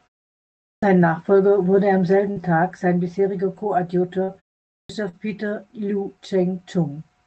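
At 0.72 s, the speech enters abruptly out of silence, its first sound already missing. This is a clipped start after a pause. The output device dozed through the preceding 0.72 s of silence and needed time to wake and lock, so about 105 ms at the onset never came out.

Just after "wurde am", at 2.31 s, there is a brief smeared wobble lasting a few hundredths of a second. This is short concealed packet loss. About 40 ms of audio did not reach the decoder in time, and the receiver bridged the hole with 44 ms of sound extended from what came just before, adding roughly a hundredth of a second. The same smear returns at 4.23 s, where 40 ms of missing audio was filled with 42 ms.

At 4.79 s, following a 0.46 s pause, the next phrase again begins without its opening. This is the same clipped start, with about 104 ms swallowed while the device woke up.

A final concealed loss at 5.09 s smears a 40 ms gap, which was patched with exactly 40 ms, so the timing is not stretched.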